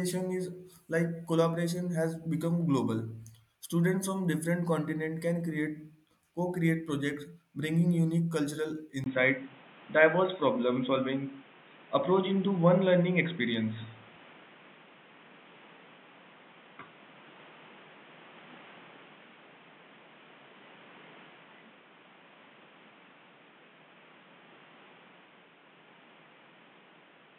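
At 9.04 s the speech turns dull and boxy, after a gap of about 20 ms, and stays that way to the end. Nothing comes through above about 3.8 kHz, the level shifts by around 5 dB, and a new background noise sits about 30 dB below the voice. The likely cause is an input switched to a poorer device: the recording moved to another microphone or a headset's narrowband call mode, with its own tone and noise.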